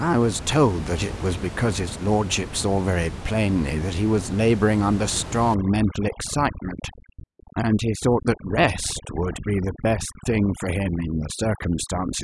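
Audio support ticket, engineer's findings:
Overdone noise removal, 5.55 s to end of clip. Background drops and breaks up into twinkling specks. Noise reducer set too aggressive: bands near its noise estimate are pulled far down or gated off, taking quieter speech detail with them. Room noise, about 11 dB under speech before onset, is what the reducer is chewing on.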